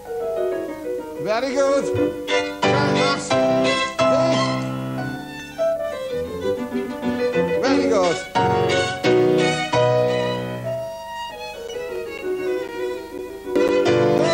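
From 11.68 s to 14.19 s, periodic USB or driver dropouts cut around 10 ms of sound every 0.5 s, about seven times, each gap filled with silence. They tick regularly over the signal, and appear as evenly spaced flat gaps in the waveform and narrow blank vertical stripes on a spectrogram.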